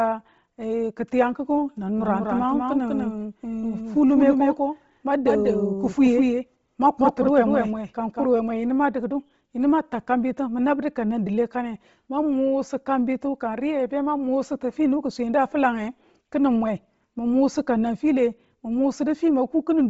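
Across the whole speech clip runs heavy damage from what is likely Bluetooth LC3 compression. Nothing survives above 7.7 kHz, and the upper band carries a breathy, grainy noise fill, which fits a low bitrate near 24 kbps. On a spectrogram the top shows a hard ceiling with smeared, speckled texture beneath it.

From 1.99 s to 8.25 s a doubled audio track appears, likely from a second, slower capture path. A full-band copy trails by roughly a fifth of a second and a few dB quieter, with no room tail, and it starts and stops abruptly. In the waveform every syllable shows a slightly smaller twin just behind it.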